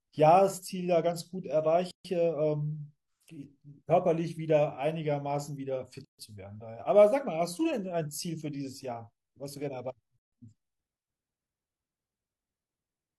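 Silences of about 0.14 s cut into the speech at 1.91 s, 6.05 s and 10.19 s, roughly every 4 s, with slightly smeared edges before the sound resumes. These are gaps at a join of encoded pieces, where each separately encoded segment kept its start-up delay and padded final frame.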